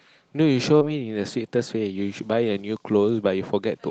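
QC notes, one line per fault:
0.77–0.86 s, short concealed packet loss: about 40 ms of audio arrived too late for the decoder, so the receiver extended the preceding sound across the hole and blended back into the real signal. This is heard as a brief smear or wobble, and the timing slips by a few milliseconds. Unlike an error-correction rebuild, this stretch is a guessed continuation, not the original sound.
0.81–0.83 s, lost packet rebuilt from error correction: one 20 ms packet was lost, and the decoder played the low-bitrate copy carried in the following packet. There is no gap, only a moment of rougher, noisier sound beneath the Opus coding noise and 8 kHz upper limit. Unlike concealment, the original content survives here, just coarsely coded.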